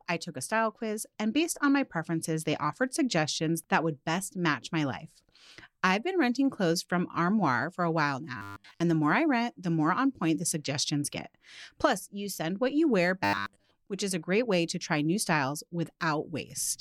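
Robotic sound from repeated short buffers appears from 8.37 to 8.81 s, after "for a while" and before "the more I rent", and again from 13.24 to 13.71 s, between "send what you wear" and "which is". Each time the speech turns into a rigid, metallic 100 Hz buzz, most likely because new audio arrived too late and a 10 ms slice was replayed over and over while most of the real signal was skipped.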